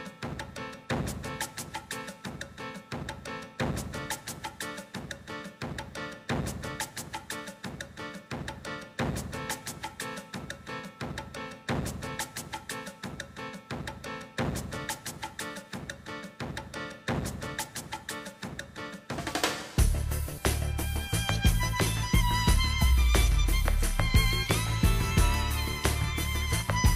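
No technical faults can be heard anywhere in the audio.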